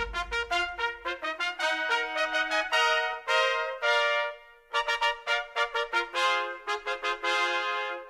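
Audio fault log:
No technical faults are audible anywhere in the music; the signal holds continuity throughout.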